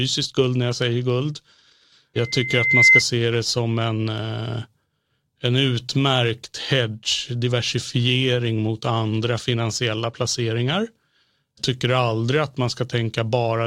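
From 2.16 to 3.03 s there's loudspeaker feedback squeal: the mic is catching its own speaker, and at about 2.1 kHz the loop gain tops one. The tone swells over most of a second until it's riding roughly 10 dB above the speech.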